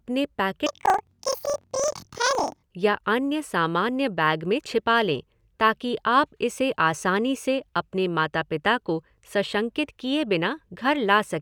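From 0.67 to 2.63 s, the speech jumps up an octave and takes on a flutter. This is planar audio read as interleaved. Each block stores all its left samples, then all its right ones. The reader treats them as alternating pairs. So each block plays twice at double speed, left half then right. The pace holds, but pitch rises 12 semitones. The flutter repeats about 23.4 times per second, which fits 2048-sample blocks of 42.67 ms.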